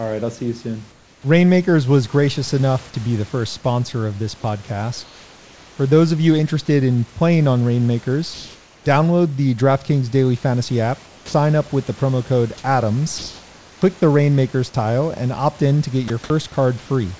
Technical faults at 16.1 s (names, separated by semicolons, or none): sound dropped by the voice detector